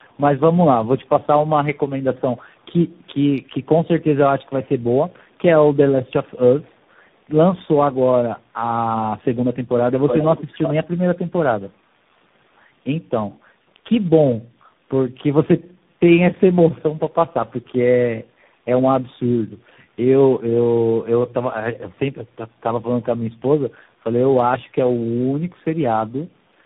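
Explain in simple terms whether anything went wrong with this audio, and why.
Something did go wrong, and it lasts the whole clip. The speech suffers from tandem speech coding. On its way, the call passed through three different speech coders in a row, each belonging to a different phone link. Every link unpacked the sound and squeezed it again. Each coder worked on damage left by the one before. So the speech sounds rough, muffled and warbly. Nothing above about 3.8 kHz survives, so the crisp top end is gone.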